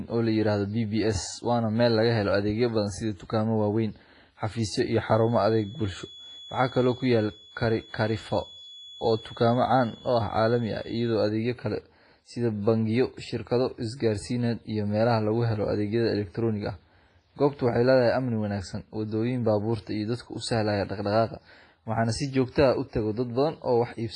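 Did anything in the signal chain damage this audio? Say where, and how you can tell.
Yes, on two counts. Throughout the clip the speech sounds ringing and washy, with a hiss that swells and shrinks along with the talker, and the damage is heavy. Nothing is left above 10.4 kHz. This points to the codec stage, likely WMA compression at a low rate, which fits a bitrate around 24 kbps. Long transform blocks smear quantisation noise over tens of milliseconds, and weak spectral lines are zeroed, which removes the top band.

From 4.83 s to 11.26 s a steady thin whistle at 3.4 kHz sits roughly 25 dB under the speech. It starts after "waaweyn xafiisyo" and is gone by "adeegyo kale sida bangiyo", swelling and fading slowly in level without ever growing into a howl. This is a feedback whistle, likely from the acoustic path where a loudspeaker feeds back into the microphone. That loop is held just below the point of runaway, so one frequency keeps ringing at a low level.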